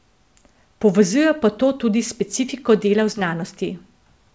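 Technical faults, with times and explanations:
3.12–3.16 s short concealed packet loss: right after "tudi s specifiko dela" the sound briefly smears and wobbles, a gap of about 20 ms that the receiver bridged by extending the preceding sound before blending back into the real signal, heard against the call path's 8 kHz bandwidth limit.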